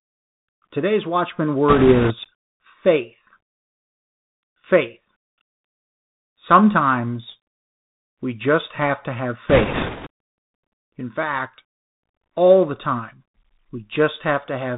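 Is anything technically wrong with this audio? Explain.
Yes, two things. The whole clip has gone through a Bluetooth CVSD headset codec, which fits a 64 kbps CVSD link. It sends one up-or-down bit per sample with an adapting step, so nothing above 4 kHz survives. The speech sounds boxy, the s sounds come out scratchy, and there's a grainy hiss underneath throughout.

On top of that there are bursts of bit errors on a Bluetooth voice link, from 1.68 to 2.14 s and again from 9.49 to 10.08 s, right after "just have to have." Flipped bits each nudge the signal only slightly and fade out, so you don't get loud clicks. Instead you get a rushing crackle. It's noticeably worse in the second burst, where something like one bit in ten is wrong, compared with several percent in the first.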